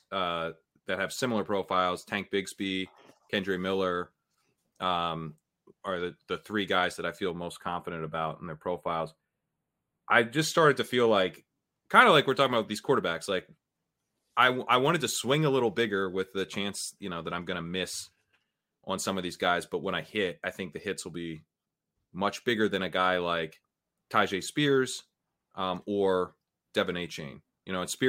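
From 7.31 to 10.39 s, after "three guys that I" and before "started to feel like", the speech turns hollow and phasey, with fixed notches starting around 5 kHz. That is channel delay (comb filtering): one channel runs about 0.1 ms late, likely a few samples, and summing to mono cancels evenly spaced frequencies.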